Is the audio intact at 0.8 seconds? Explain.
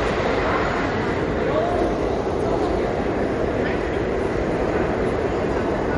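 No. At 0.8 s, as across the whole clip, MP3 compression is plainly audible: nothing remains above 11.2 kHz, and weak spectral lines flicker between frames, giving a watery, swirly texture with smeared attacks. This likely comes from a low bitrate, around 48 kbps.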